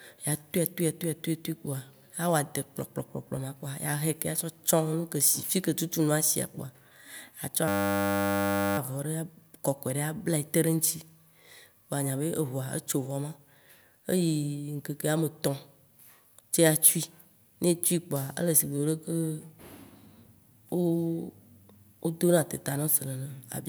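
From 7.68 to 8.78 s the speech gives way to a steady, flat buzz at 100 Hz. This is a system hang loop: the system froze while the sound hardware kept replaying one 10 ms stretch of its ring buffer, over a hundred times in a row.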